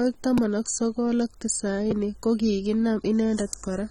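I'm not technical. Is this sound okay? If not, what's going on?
No. Two separate problems can be heard in this speech clip.

The first affects the whole recording and sounds like AAC compression, the kind used to shrink audio files for streaming or messaging. Here it was likely squeezed quite hard. That makes the voice sound dull and plainly smeared, with a watery or fizzy edge on hissing sounds like "s". Very high frequencies are missing entirely above about 17.9 kHz. That cut-off matters less than the general loss of clarity.

The second is a repeated buffer, which happens twice: at 0.38 s, just before "ak sokol ak", and at 1.91 s, just after "ak sokol ak". Each time, the playback device ran out of fresh audio. It played its last tiny chunk again, about 5.8 ms long, which fits a very small 256-sample buffer. Because the repeat is so short, it comes across as a quick click or tick rather than an obvious stutter.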